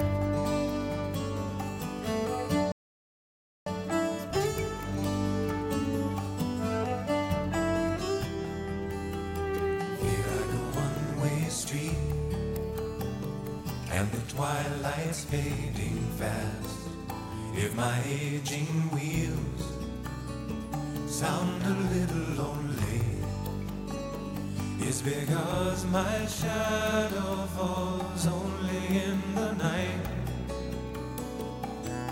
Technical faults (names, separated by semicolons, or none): rebuffering stall